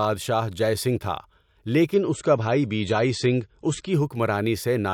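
From 1.94 to 3.94 s the speech switches abruptly, with no gap, to an adaptive stream at a lower bitrate, consistent with a slowed connection forcing a drop from roughly 128 to 37 kbit/s MP3. Treble dulls and artefacts swirl. A spectrogram shows everything above 8.3 kHz vanishing for that stretch.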